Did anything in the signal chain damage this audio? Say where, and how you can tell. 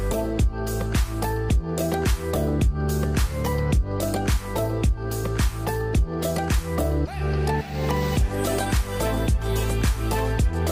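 No, nothing in the signal chain damaged this audio, so there is no point where damage can be heard.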